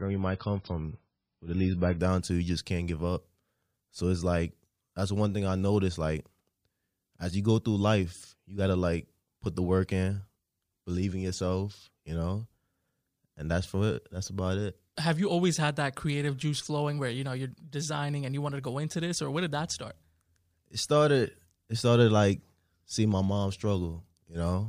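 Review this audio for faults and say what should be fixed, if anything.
The player began on a low-bitrate rendition of the adaptive stream and stepped up only after measuring the connection. From 0.0 to 2.0 s the speech has nothing above about 5.6 kHz, with stronger codec artefacts consistent with roughly 16 kbit/s MP3. It then jumps abruptly, without a gap, to better quality with more treble, fitting 128 kbit/s. To prevent it, start playback on a higher-bitrate rendition or buffer until bandwidth is estimated.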